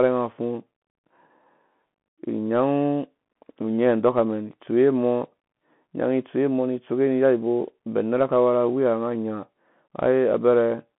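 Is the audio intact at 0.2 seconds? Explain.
No. At 0.2 seconds the speech already carries the Bluetooth CVSD headset codec, which runs through the whole clip. This codec sends one bit per sample, saying only up or down, with an adapting step size. That fits a 64 kbps stream. The band sits between about 150 Hz and 3.4 kHz, and nothing passes above 3.8 kHz. The damage is plainly audible. S sounds turn scratchy, and a granular hiss lies beneath the speech.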